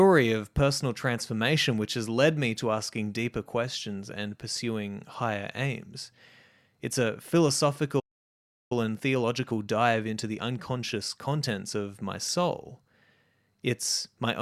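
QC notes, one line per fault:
7.99–8.72 s, playback stall: the speech cuts out mid-flow and the output sits silent for about 0.71 s before resuming. The likely cause is the player running dry of buffered data or its audio thread being blocked, so nothing reached the output until it recovered.
8.72–11.72 s, time-compressed catch-up: straight after the gap the speech runs about 1.1 times faster at unchanged pitch. The player is trimming its backlog by dropping short slices and cross-fading the joins, which hurries delivery without shifting pitch.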